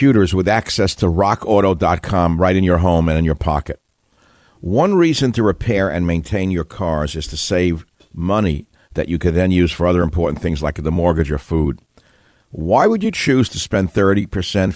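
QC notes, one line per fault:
No faults were found in this speech clip. Nothing here needs a timestamped entry.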